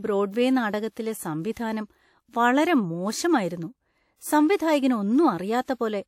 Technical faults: pre-echo

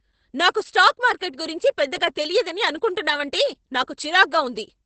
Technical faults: Opus voice compression

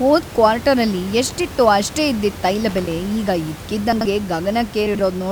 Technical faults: loose connector crackle; chunks out of order

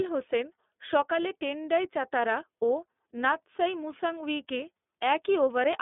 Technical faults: iLBC codec

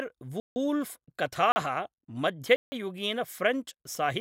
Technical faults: block of digital silence

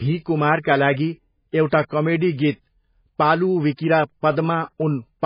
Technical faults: MP3 compression

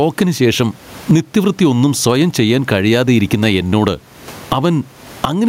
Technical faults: gain pumping

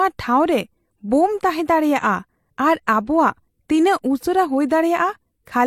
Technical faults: transcoding between lossy codecs

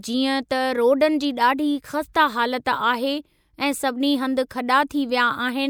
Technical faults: none

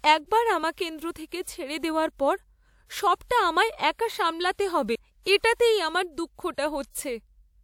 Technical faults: CD skip

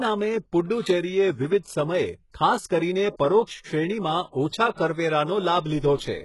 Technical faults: HE-AAC compression; pre-echo

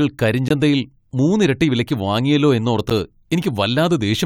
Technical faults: block of digital silence

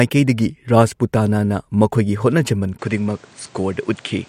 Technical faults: input switched to a poorer device

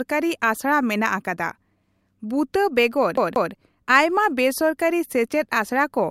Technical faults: CD stuck on one turn

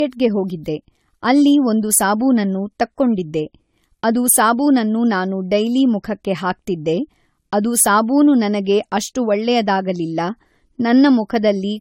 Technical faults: generation loss

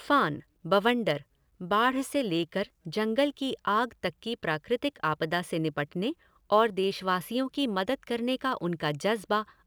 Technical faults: dropped samples

